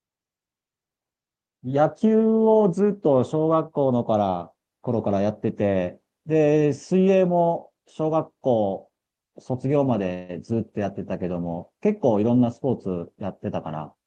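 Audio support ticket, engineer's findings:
Call audio freeze, 10.13–10.31 s: sound stalls and the last instant is carried on as a fading buzz for about 155 ms. Likely late packets draining the jitter buffer; receiver concealed the wait, then resumed where it stopped. Nothing lost, roughly 155 ms of added delay.

Jitter buffer speed-up, 13.76–14.04 s: speech runs hurried at about 111% speed, pitch unchanged. Buffer over target; receiver trimmed short pitch-period pieces in succession, around 40 ms in total, to pull latency back down.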